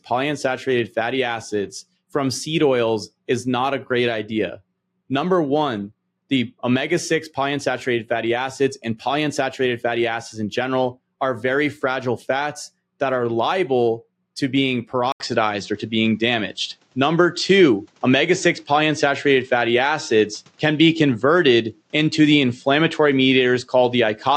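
At 15.12 s the recording input was likely switched to a poorer device, so the capture path changes in mid-recording. An 80 ms silence marks the switch. From there to the end the sound is band-limited, with nothing above 8.2 kHz, giving a duller, boxier tone. The level shifts by a few decibels, and a new, faint background noise appears well below the signal, roughly 45 dB down.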